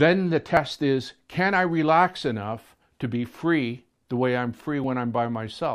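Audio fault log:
0.57 s and 4.84 s, dropped buffer (overrun): two points where the sound jumps forward with no gap, skipping roughly 10 ms at the first and about 20 ms at the second. This is likely samples overwritten before they were read, leaving the two sides butted together.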